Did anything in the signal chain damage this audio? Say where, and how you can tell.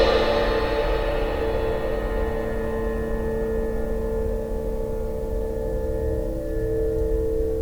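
No, nothing in this music points to damage at any stage of the signal chain.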